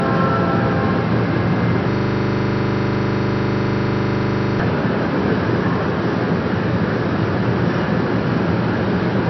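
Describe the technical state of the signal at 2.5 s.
At 2.5 s you're right in the middle of a system hang loop that runs from about 1.91 to 4.60 s. The machine or its audio driver seems to have frozen while the sound hardware kept replaying the same tiny slice of buffer, so one 40 ms chunk repeats over and over, dozens of times in a row. At 25 repeats a second that comes across as a rough, stuttering buzz rather than anything moving forward.

Underneath that, the whole clip carries plainly audible MP3 compression damage, likely from a very low bitrate somewhere around 30 kbps. The encoder has chopped everything off above 5.9 kHz, so the audio sounds dull, and with so few bits to spend it's dropping weaker frequency content from frame to frame. That gives a watery, swirly texture, and any sharp attacks come out smeared.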